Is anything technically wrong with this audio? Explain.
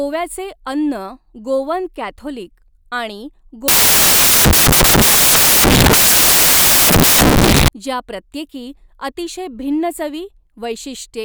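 Yes. From 3.68 to 7.68 s the speech turns into loud, harsh broadband noise, right up until "ज्या प्रत्येकी". Those are samples built from the wrong bytes: byte order or alignment is off, so the jittery low bits dominate each value.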